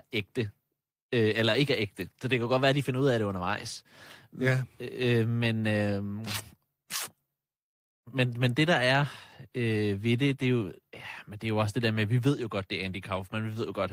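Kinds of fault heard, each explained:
Clock drift between sender and receiver: The sending side's audio clock runs roughly 1.5 percent slower than the receiver's, so the jitter buffer keeps running short. The receiver has to pad the speech with repeated fragments, and small timing hiccups recur unevenly throughout.
Repeated timing corrections: To keep pace with the slower sender, the receiver keeps repeating short slices of audio from about 0.48 s to 13.43 s. This stretches the speech to about 99 percent speed, adding about a fifth of a second in all.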